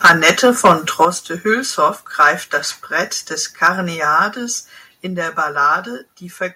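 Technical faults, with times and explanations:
0.04–0.72 s, 1.01–1.05 s, 2.21–2.30 s, 3.64–3.68 s: microphone overload, peaks about 10, 3, 2 and 4 dB over full scale, flat-topped waveform, broadband crackle smeared upward on a spectrogram, likely from excessive input volume.
0.06 s, 1.05 s, 5.07 s: microphone volume stepped down by about 2, 8 and 3 dB. The waveform envelope drops abruptly, likely from call software cutting an overloading input.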